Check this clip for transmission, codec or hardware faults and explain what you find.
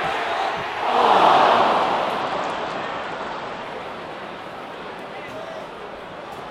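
One fault is present: a Bluetooth SBC bit pool drop from 2.21 to 3.63 s. The link's encoder cut its bit budget, apparently from a bit pool near 31 to about 13, roughly 94 kbps. The upper sub-bands were starved and the rest coarsely quantised. The treble turns dull and a gritty noise rises, then recovers. On a spectrogram the high bands thin or vanish with a speckled noise floor across that stretch, while the waveform looks largely unchanged.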